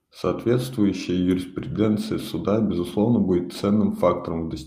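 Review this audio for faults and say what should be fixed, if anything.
Nothing in this audio needs to be fixed, as no faults can be heard.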